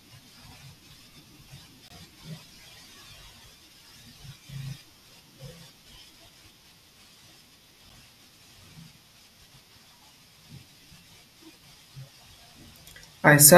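The timestamps of consecutive stream segments fail to line up, leaving gaps between stream segments that the player pads with silence. The two holes fall about 6 s apart, which fits 6-second segments. At 1.88 to 1.90 s the speech drops out for about 20 ms, and at 7.89 s a shorter 7 ms hole follows. Each has abrupt edges, so the speech cuts off and resumes sharply, with nothing missing on either side.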